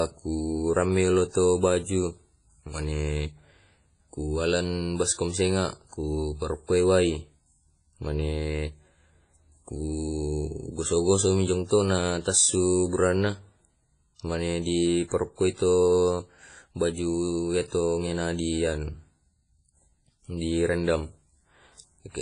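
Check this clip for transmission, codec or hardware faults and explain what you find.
The speech has one fault, present for the whole clip: WMA compression, likely from a low-bitrate Windows Media Audio encode. The heavy damage points to roughly 24 kbps. Long transform blocks let quantisation noise smear across tens of milliseconds around each syllable, and weak spectral lines are zeroed. The voice sounds ringing and washy, with a hiss that swells and fades with the speech, and nothing survives above 10.5 kHz.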